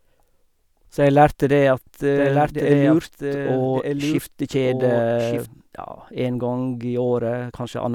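A speech recording carrying a doubled audio track from 2.16 s to 5.46 s: a second full-band copy trails the original by about a second, roughly 5 dB quieter, with no decay or room colour, and it cuts in and out abruptly. This is likely a duplicate capture through a slower path. On a spectrogram the formant pattern repeats, fainter and shifted right; the waveform shows overlapping envelopes with sharp edges at both ends.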